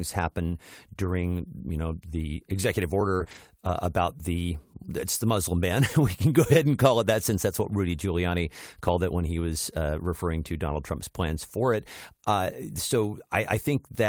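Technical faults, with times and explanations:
3.15 to 3.22 s and 3.24 to 3.27 s, short concealed packet loss: about 40 ms and then 20 ms of the call arrived too late for the decoder, so it covered each hole by extending the preceding sound, carrying its pitch forward if voiced and otherwise filling with shaped noise, before fading back into real audio. Around 3.2 s this is heard as a quick smear or wobble, and a brief consonant there may drop out entirely.
3.20 to 3.22 s and 3.27 to 3.37 s, lost packet rebuilt from error correction: these stretches, 20 ms and then 60 ms, which fits one and then three 20 ms packets, were lost, but each following packet carried a low-bitrate backup copy that the decoder played instead. No gap opens, but the sound in those spans turns coarser and grainier than the surrounding audio, because the backup copy holds far less detail than the original.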